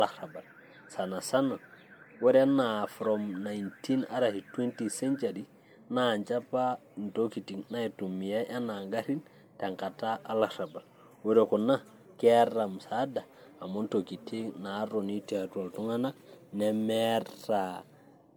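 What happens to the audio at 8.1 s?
At 8.1 s the speech sounds swirly, hollow and smeared, with blurred attacks, as it does throughout; this is likely generation loss from about four passes through a roughly 96 kbit/s MP3 codec.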